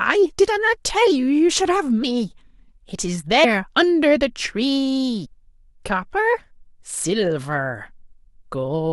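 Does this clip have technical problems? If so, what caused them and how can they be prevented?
Yes. The speech has compressed frames skipped four times: at 2.02 s, 3.43 to 3.45 s, 5.24 to 5.26 s and 7.03 to 7.05 s. At each point the audio jumps forward. Roughly 150 ms, 300 ms, 300 ms and 100 ms go missing. Whole frames were lost from the file or rejected by the decoder as damaged. Prevent it with error-checked storage and transfer of the encoded file.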